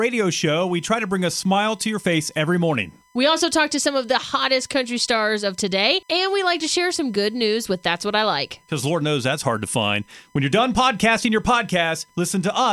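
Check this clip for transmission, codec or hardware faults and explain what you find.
There is one hardware fault, USB whine. From 0.45 s to the end at 12.72 s, a steady whine sits at 1 kHz, roughly 35 dB below the speech. The USB bus draws current in 1 ms frames, and that periodic load leaks into the audio through the power or ground, giving this fixed-pitch tone.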